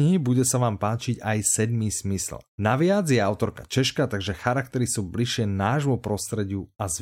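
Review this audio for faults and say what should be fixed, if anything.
Nothing here needs fixing, as no technical fault can be heard anywhere in the speech. There is no repair to make and nothing to prevent.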